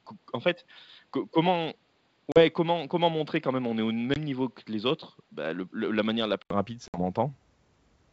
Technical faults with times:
0.00-6.50 input switched to a poorer device
2.32-2.41 packet loss on an ADPCM call
4.14-4.18 packet loss on an ADPCM call
6.88-6.98 packet loss on an ADPCM call

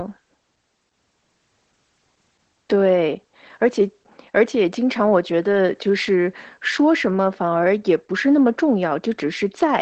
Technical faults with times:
0.00-9.81 Opus voice compression
2.23-9.59 clock drift buffer slips

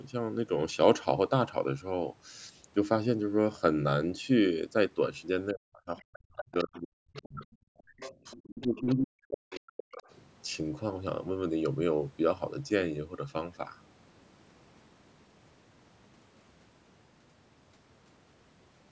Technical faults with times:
5.52-10.06 speech suppressed in double talk
5.97-6.79 other side's voice leaking through
7.14-7.24 other side's voice leaking through
7.99-8.95 other side's voice leaking through
9.52-9.60 other side's voice leaking through
9.97-10.11 other side's voice leaking through

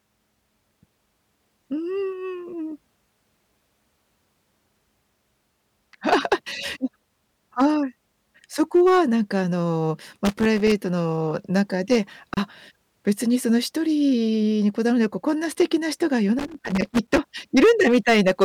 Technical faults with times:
0.00-18.44 hard clipping
10.25-10.72 loose connector crackle
12.34-12.37 gap at a join of encoded pieces
16.39-17.18 loose connector crackle

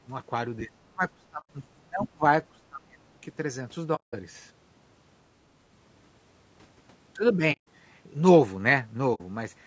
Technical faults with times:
0.00-9.66 low-delay AAC compression
0.00-0.10 speech suppressed in double talk
0.64-2.23 speech suppressed in double talk
1.40-1.50 AAC frame loss with muting
2.01-2.08 other side's voice leaking through
2.52-3.20 speech suppressed in double talk
3.95-4.14 AAC frame loss with muting
7.52-7.67 AAC frame loss with muting
9.14-9.21 AAC frame loss with muting

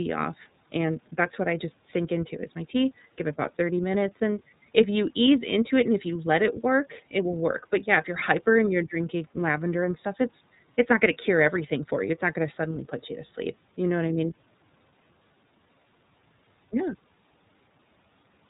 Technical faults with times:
0.00-18.50 iLBC codec

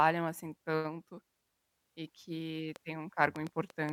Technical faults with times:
2.76-3.92 train of clicks

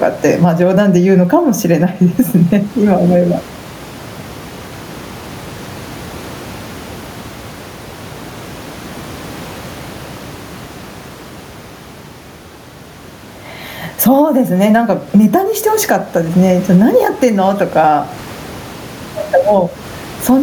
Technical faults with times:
0.00-20.43 gain pumping

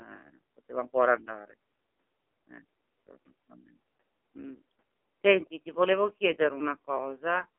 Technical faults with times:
0.00-7.59 AMR narrowband mobile codec

